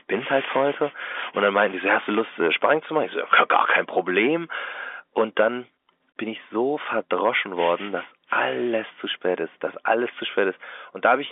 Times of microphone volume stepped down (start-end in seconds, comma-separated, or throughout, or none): 0.19, 5.41